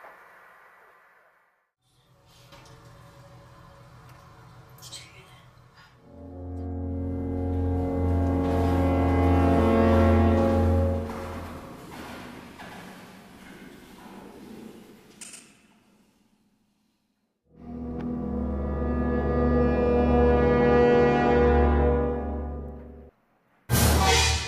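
From 9.59 to 15.39 s a doubled audio track appears: a full-band copy trails the original by about a tenth of a second, around 5 dB quieter, with no decay or room colour. It likely comes from a second, slower capture path or two misaligned copies in an edit. On a spectrogram every event shows a repeated ghost just to its right, and the waveform's transients double, with the copy cutting in and out abruptly at both ends.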